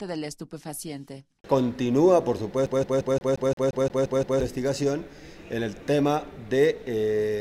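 From 2.66 s to 4.41 s the audio gets stuck on one turn, like a CD whose laser keeps jumping back at a scratch. A loop of about 175 ms plays ten times. Each jump leaves a short mute. The result is a fast, even stutter.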